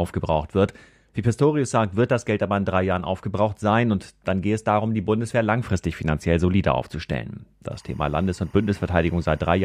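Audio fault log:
7.72–9.64 s, timecode bleed: Right after "langfristig finanziell solider aufzustellen", a faint chirping warble enters behind the speech and runs to the end. It sits roughly 35 dB below the speech. Linear timecode from a neighbouring track or cable is leaking in. The code is a square wave that flips between tones near 1 kHz and 2 kHz. That flipping gives the chattering, two-pitch texture. Its rhythm fits 24-frame code.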